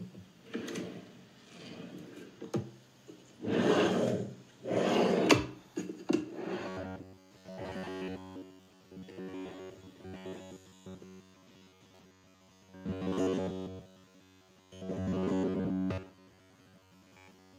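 From 6.68 s to the end of the clip at 17.59 s, the everyday sounds pick up robotic sound from repeated short buffers. Everything takes on a stiff, metallic buzz at about 93.8 Hz that still loosely tracks the original sound. That pitch points to a chunk of roughly 10.7 ms being replayed over and over, likely because fresh audio wasn't arriving fast enough. Around 70% of the stretch is this filler rather than real signal.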